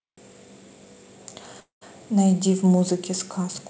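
Speech, carried over a call path whose sound stops at about 8 kHz, consistent with a wideband codec such as G.722 at 64 kbps. From 1.60 to 1.83 s there is a call audio freeze: the last sound is stretched into a fading buzz or hiss for roughly 0.1 s, then about 110 ms of silence, before the speech resumes where it left off. Nothing is lost, but everything after is pushed about 214 ms late. The likely cause is packets delayed in transit, draining the jitter buffer until they arrived.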